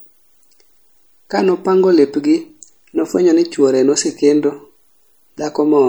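From start to finish the speech carries plainly audible damage, likely from MP3 compression. Weak detail flickers in and out, giving a watery, swirly texture. S sounds chirp metallically. The loss fits a bitrate near 64 kbps.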